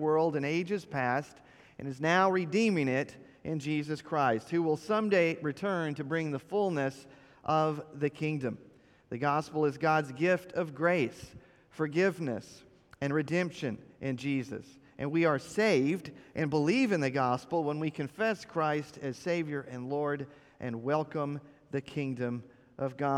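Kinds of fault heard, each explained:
No technical faults can be heard anywhere in the audio: the signal holds steady without dropouts, distortion, level jumps or timing disturbances.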